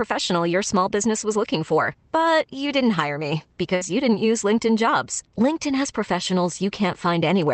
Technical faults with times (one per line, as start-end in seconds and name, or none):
3.75-3.83 burst of packet loss